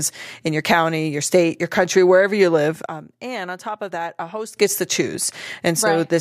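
A speech clip with a sudden gain jump: right after "country wherever you live" at 2.86 s, the level drops by about 12 dB, voice and background noise together, then snaps back up at 4.57 s before "gets to". That's likely a gain setting applied instantly with no ramp.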